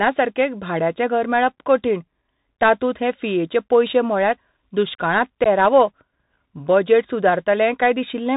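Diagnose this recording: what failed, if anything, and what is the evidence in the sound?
Codec stage: the whole thing's gone through a Bluetooth CVSD headset codec, nothing above 4 kHz, scratchy sibilants and grainy hiss from the 64 kHz one-bit delta modulator.

Bluetooth link stage: unconcealed headset packet loss at 5.44 to 5.47 s, about 15 ms of speech dropped, probably a couple of packets, leaving an abrupt hole.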